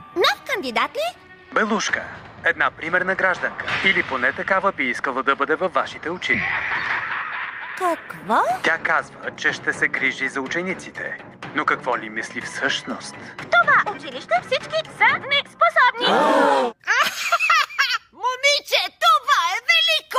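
No technical fault can be heard anywhere in the audio. Nothing in it points to a problem in how the sound was captured, processed or delivered.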